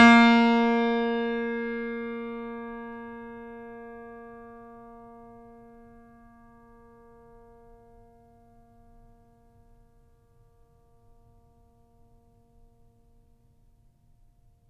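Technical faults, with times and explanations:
No technical faults can be heard in the music. There is nothing here that needs a time or an explanation.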